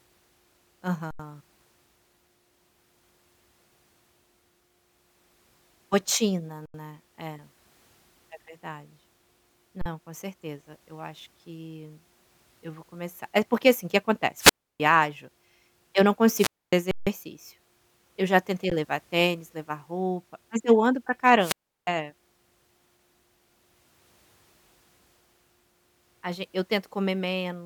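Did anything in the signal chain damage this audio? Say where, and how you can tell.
Yes. At the driver or buffer stage there is underrun with held sample at 1.11 s, 6.66 s, 9.81 s (just before "com certeza eu acho"), 16.91 s and 18.70 s. The waveform freezes flat for 85, 85, 43, 156 and 16 ms, then resumes where it stopped with no missing speech and a soft re-entry. The 85 and 43 ms gaps fit 4096- and 2048-sample buffers.

Upstream, in the analogue radio link, there is wireless microphone squelch dropout at 14.37 to 14.80 s (after "porque assim que"), 16.35 to 16.73 s (after "eu não") and 21.38 to 21.89 s. Each time, hiss swells as the FM signal fades, then the receiver's squelch mutes the output for about 310, 260 and 350 ms before speech returns.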